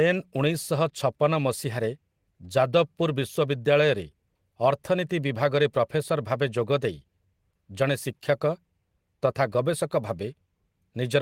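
Speech, with nothing technically wrong to be heard anywhere in it.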